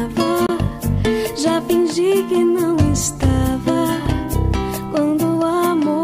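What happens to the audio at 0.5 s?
Right around there, from 0.46 to 0.50 s, the sound cuts out for about 23 ms and then comes back as if it had kept playing underneath. That's likely a Bluetooth dropout, where a packet missed its deadline to the headphones, which fits a single lost frame.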